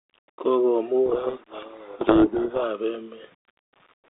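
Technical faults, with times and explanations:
throughout: low bit depth without dither. The samples were likely rounded to a coarse grid, which fits an 8-bit word, with no dither to break up the error. Because the rounding error tracks the waveform instead of sitting as a steady hiss, it shows up as a grainy, gritty distortion riding on the speech. It sits around 35 dB below the signal, grows most obvious as the speech fades, and changes character with every sound.
1.06–2.64 s: codec payload misread. The receiving side read the G.726 code words with their bits in the opposite order from how they were packed, so each sample's difference value was decoded into the wrong number. The adaptive predictor then builds on these wrong steps, and the speech becomes buried in harsh, rasping distortion for this stretch. Outside it, the 32 kbit/s G.726 line band of roughly 300 Hz to 3.7 kHz can be heard.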